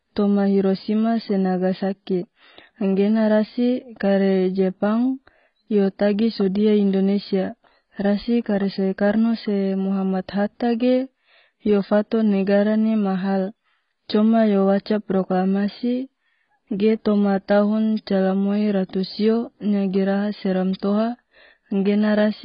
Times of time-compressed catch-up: none

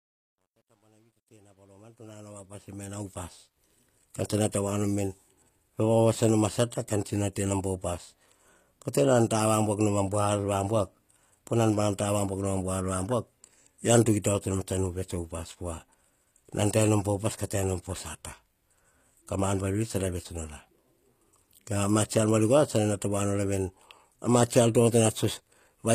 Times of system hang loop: none

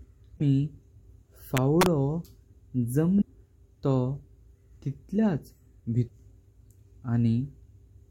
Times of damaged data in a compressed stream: 0.35-0.41, 3.20-3.23, 6.05-6.10

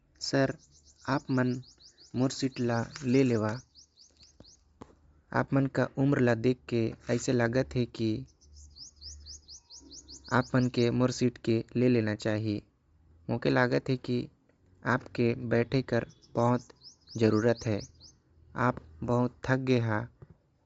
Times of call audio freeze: none

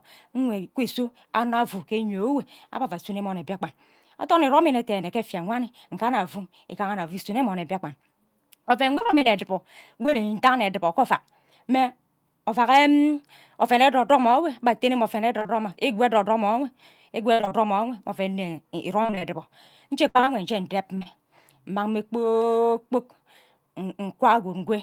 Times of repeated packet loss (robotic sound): 8.95-10.31, 15.39-15.51, 17.33-17.53, 19.03-21.07

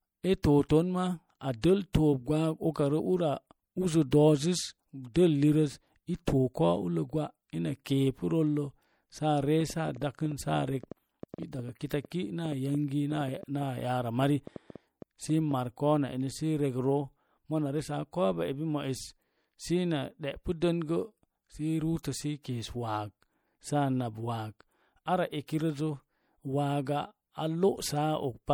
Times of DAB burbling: none

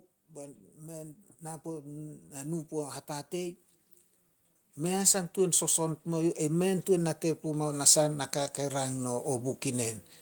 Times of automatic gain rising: 0.35-3.63, 4.76-9.97

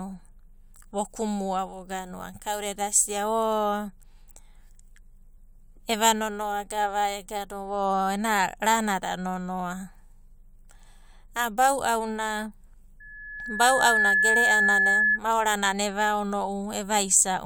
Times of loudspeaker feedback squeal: 13.00-15.20

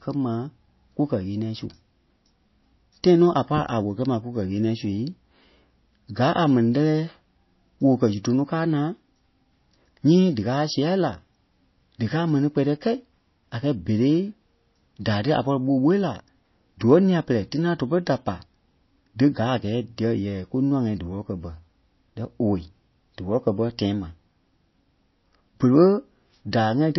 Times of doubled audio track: none

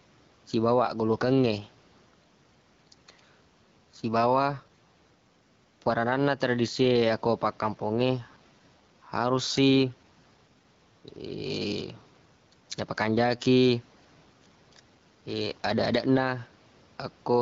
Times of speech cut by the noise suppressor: none

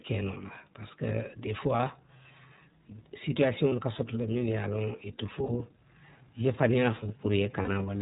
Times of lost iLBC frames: 1.76-1.80, 3.69-3.72, 5.45-5.50, 7.62-7.69

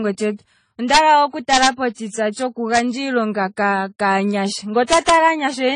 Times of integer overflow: 0.94-0.97, 1.53-1.67, 2.75, 4.93-5.14

